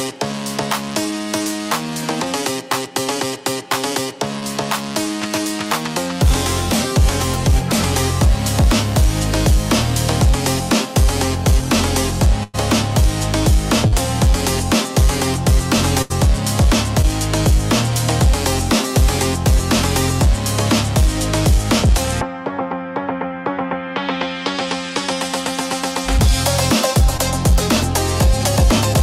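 Packets arrived too late or not at all in several places, causing short concealed packet loss at 4.39, 13.87, 17.02 and 27.17 s. Each gap of roughly 20 to 40 ms was patched by extending the preceding sound, which leaves a brief smear or wobble where the real audio should be. Two longer runs of packets were also lost, giving a burst of packet loss at 12.43 s (about 100 ms missing) and 16.02 s (about 80 ms). There the receiver stretches the last sound into a fading buzz or hiss before the audio picks up further along, with that stretch of material gone.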